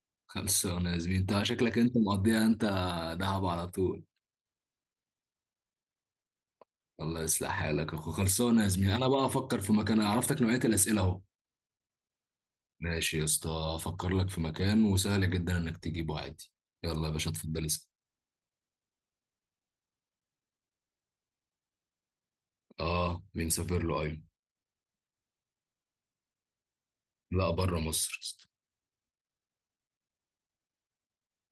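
No technical faults can be heard anywhere in the speech recording. There are no events to place in time, so nothing here needs a timestamp.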